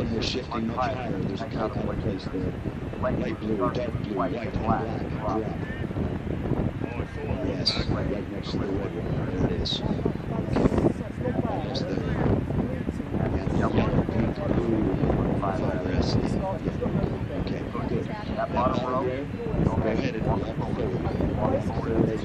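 No technical faults can be heard at any point in the audio.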